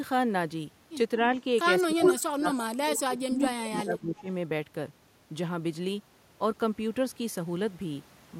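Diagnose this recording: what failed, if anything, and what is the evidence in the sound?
The failure is in call processing, where the echo canceller struggles. The talker's level dips three times. At 1.17 to 1.33 s the drop is slight, about 5 dB. From 1.84 to 2.56 s it falls hard, by about 25 dB, over roughly half a second. From 3.05 to 4.28 s it sinks by about 20 dB, for around a second in all. This is likely speech suppressed in double talk. With both sides speaking, the canceller turned the near talker down along with the echo.

The same call processing also lets through an echo leak. A delayed copy of the sound appears from 1.98 to 2.18 s, lagging by 227 ms. It is louder than the direct sound there. A second, quieter copy follows at 2.88 to 3.0 s with the same 227 ms lag. The fixed delay likely means a loudspeaker path the canceller did not fully remove, so the echo was sent back down the line.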